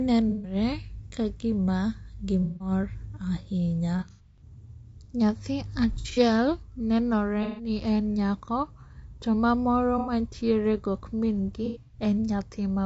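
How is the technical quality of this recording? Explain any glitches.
The technical quality is poor. The speech has a constant coded roughness, and seven short dropouts break it up.

Throughout, the speech sounds rough and grainy. Noise sits between the harmonics, and the top band sounds thin and synthetic. This points to low-delay AAC compression, likely AAC-ELD at a rate near 32 kbps. Its short frames resolve pitch harmonics poorly. At this bitrate the damage is plainly audible.

AAC frame loss with concealment occurs at 0.29 to 0.55 s, 2.42 to 2.71 s, 3.98 to 4.42 s, 5.93 to 6.19 s, 7.43 to 7.69 s, 9.98 to 10.12 s and 11.66 to 11.98 s. Each gap lasts 90 to 210 ms. At 3.98, 5.93 and 11.66 s the losses are scattered, with runs of about 100 ms at most. The decoder rebuilds missing frames from the last good spectrum. The result sounds like smeared, noisy, phasey patches.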